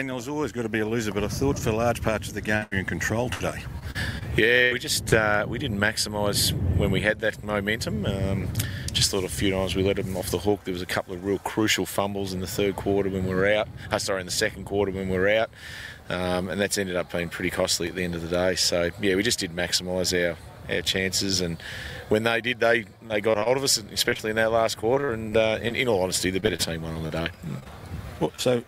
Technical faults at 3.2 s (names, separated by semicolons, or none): repeated packet loss (robotic sound)